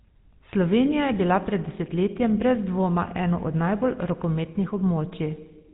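From start to finish the speech has gone through a GSM full-rate codec, and the damage is plain: a buzzy, gravelly roughness from the crude pulse-driven excitation, with nothing above about 3.8 kHz. That dull, narrowband sound fits the old 13 kbps GSM voice coding.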